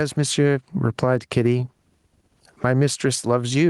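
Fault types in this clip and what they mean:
Gain pumping: All the way through this speech clip the level keeps pumping, swinging by about 15 dB. That's likely the input gain set far too hot and a fast limiter or compressor pulling it back down on each peak. So the loud and quiet parts sit close together and the whole thing sounds squashed.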